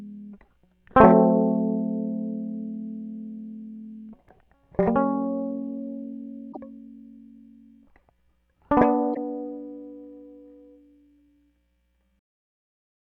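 At 6.49 to 6.57 s, and again at 9.11 to 9.17 s, the music breaks into a short glitch. That's damaged data in a compressed stream: the decoder hits corrupted frames, loses sync and scrambles for the next valid header.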